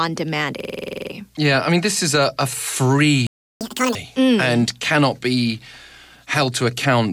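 At 0.60 s the system hangs while the sound hardware keeps cycling one 46.4 ms buffer, which fits a 2048-sample ring. This system hang loop repeats 11 times at 21.5 Hz until 1.12 s, giving a machine-gun stutter and losing about half a second of speech.

From 3.27 to 3.61 s the player likely ran out of data or was blocked. This playback stall makes the speech stop dead for 341 ms.

From 3.61 to 3.95 s the player works through its backlog with catch-up at higher speed. The speech runs at double speed and about ten semitones high, then returns to normal just before "mm and cannot be".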